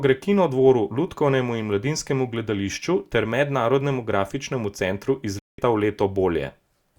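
Just after "grafičnemu centru iz", at 5.39 s, the speech fades out within about 3 ms and stays silent until 5.59 s, a hole of roughly 0.19 s. This is a digital broadcast dropout: the receiver muted when frames were lost or corrupted, and that audio is gone.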